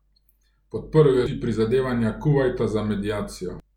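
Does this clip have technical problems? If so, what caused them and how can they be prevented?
Yes. The speech has two short glitches from damaged data in a compressed stream: one at 1.26 s and a longer one from 3.60 to 3.63 s. At each point some bytes of the encoded stream were corrupted, so the decoder misread those frames, lost frame sync and had to hunt for the next valid header. To prevent it, carry the stream over a checked transport and verify file integrity with checksums before decoding.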